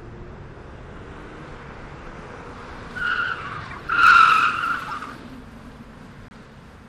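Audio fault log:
2.05–2.08 s corrupt frame decoded. A brief, faint blip peaking at about -35 dBFS. Damaged data in a couple of compressed frames was played anyway, putting energy at wrong frequencies.
3.70–3.89 s corrupt frame decoded. A longer squeaky burst peaking at about -25 dBFS. It fits a run of several damaged frames, each decoded with misread gains or codes.
4.88–4.93 s corrupt frame decoded. A short, sharp chirp peaking at about -20 dBFS, the loudest of these. Flipped bits in a couple of frames put energy at false frequencies.
6.28–6.36 s corrupt frame decoded. A quick noisy blip peaking at about -30 dBFS. It points to a few bad frames that were decoded instead of being concealed.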